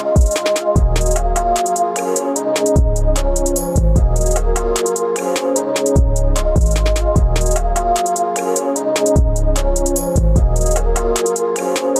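Listening through the recording, nothing stood out as a technical problem at any point.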